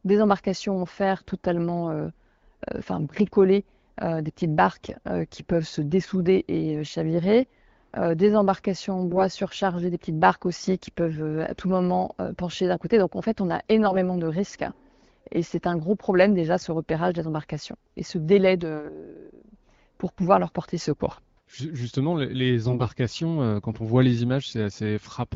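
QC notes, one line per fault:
4.83–4.97 s, 9.08–9.21 s, 13.84–13.98 s and 22.65–22.88 s, AMR bit errors: short hoarse, gargly scratches, the first right after "enfin bricolées des petites", the second after "des embarcations en", the last just before "euh quand on voit". Pitch and level roughly hold, but a few percent of the weakly protected bits got flipped, so the excitation pulses land in the wrong places and the fine pitch, gain and spectral values drift. Each burst spans what sounds like six to eight 20 ms frames, while the clear 12.65 kbit/s AMR-WB coding around them gives a clean contrast.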